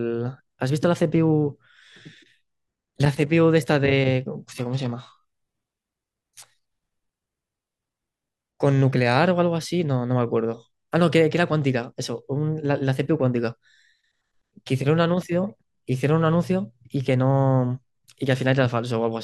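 An adaptive stream at a lower bitrate runs from 4.52 to 8.52 s in this speech recording. For those four seconds the player switched to a cheaper version of the stream, as a streaming client does when the connection slows. The sound fits a drop from roughly 96 kbit/s AAC to a 16 kbit/s HE-AAC rendition. Coding artefacts rise, and both switches happen abruptly with no gap.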